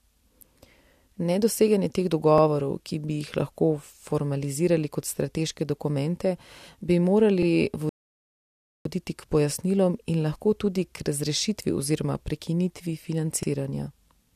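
Speech, with overlapping chunks at 2.38 s, 7.43 s (just after "kot strateške dokumente bi") and 13.43 s (after "razrešitvi oziroma prekinitvi"). Each chunk was processed starting 44 ms before the previous one ended, so that slice plays twice, producing a brief stutter roughly every 5 s of audio. A rebuffering stall runs from 7.89 s to 8.85 s: playback drops to silence for about 0.96 s while the player waits for data, then resumes exactly where it halted. No speech is lost, only time is added.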